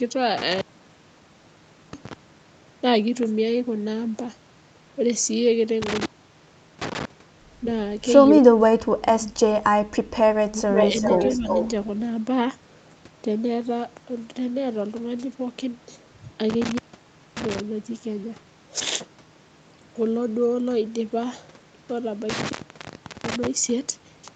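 From 8.41 to 9.48 s the speech dips hard, by about 30 dB at its deepest. This is speech suppressed in double talk. It is likely an echo canceller muting both sides while they overlap. It returns from 10.48 to 10.72 s, dropping by about 20 dB.

At 10.75 s an echo leak begins and runs to 11.68 s. A copy of the speech comes back 383 ms late, only a little quieter than the original. A loudspeaker's echo was likely not fully cancelled and was sent back.

Within that stretch the suppression strikes again. It causes a slight dip from 10.91 to 10.96 s and a deeper one, about 10 dB, from 11.19 to 11.46 s.

Throughout, the Opus call path limits the sound to 8 kHz.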